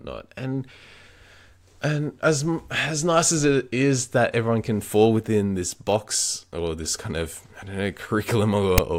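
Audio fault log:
8.78 s, file tags played as audio: text tags and zero padding read as samples give a brief, hard-edged rasp offset to one side, then silence.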